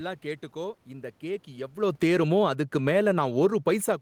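Just after "கேட்டுக்கோ இந்த கேக்", at 1.77 s, the automatic gain falls. The talker had shifted position around 1.5 s. The gain control judged the input too loud, or its background too strong, and pulled its gain down slowly. Over the next 1.65 s, to 3.42 s, the level drops by about 12 dB. The voice sinks gradually. The room noise behind it sinks too, at the same rate.

At 3.36 s the automatic gain starts rising, overlapping the end of the fall. The input level had dropped by about 23 dB. The control reacted to the quiet and began pushing its gain back up. From 3.36 s to 3.98 s it adds about 4 dB. Voice and background swell together. The talker moves again near the very end, at about 4.0 s.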